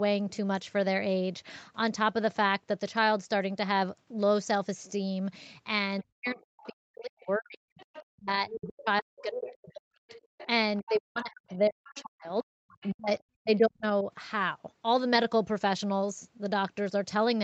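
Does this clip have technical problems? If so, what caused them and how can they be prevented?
Yes. The echo canceller likely failed to fully remove the far end's loudspeaker sound from the microphone, so the other side's voice leaking through can be heard faintly, about 20 to 25 dB below the talker, at 6.01–6.71 s, 7.79–9.22 s, 10.08–12.01 s and 12.81–13.57 s. Better acoustic isolation, such as a headset or lower loudspeaker volume, and a well-converged echo canceller would prevent it.

Speech suppressed in double talk occurs from 6.02 to 10.12 s and from 10.82 to 14.07 s. With both sides talking at once, the echo suppressor likely could not tell the talker from the echo and turned everything down. The talker's voice dips by as much as about 40 dB, over several seconds in total. A double-talk detector tuned to favour the near-end talker, or a full-duplex headset, would prevent it.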